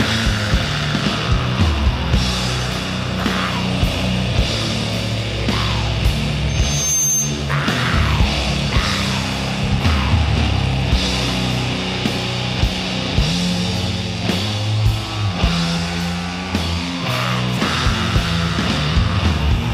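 Audio with a loudspeaker feedback squeal at 6.49–7.53 s: a 6.3 kHz tone, from a microphone re-amplifying its own loudspeaker, swells to roughly the level of the programme within half a second, unlike a steady whistle.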